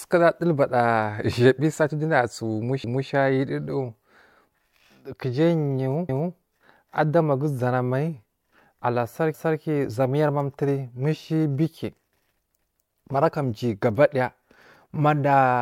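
Overlapping chunks at 2.84, 6.09, 9.34 and 12.59 s: the speech was handled in 3-second blocks, each starting 250 ms before the previous one ended, so that quarter-second replays at every join, heard as a regular stutter.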